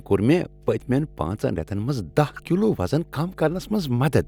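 A steady mains hum runs under the speech from start to finish, sitting at 50 Hz with a few low harmonics stacked above it. Power-line energy has leaked into the signal path, most plausibly through a ground loop or stray field from a transformer near the recording chain. The tone sits roughly 25 dB below the speech, so it stays audible as a constant low drone in every pause and under each phrase.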